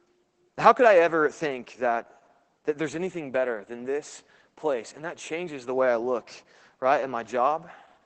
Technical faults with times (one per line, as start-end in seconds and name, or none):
0.00-8.06 Opus voice compression